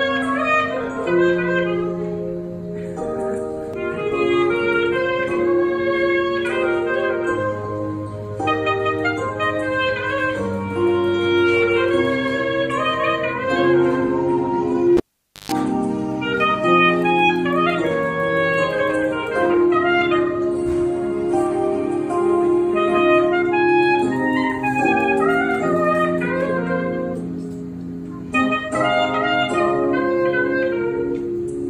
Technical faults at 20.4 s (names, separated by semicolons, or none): none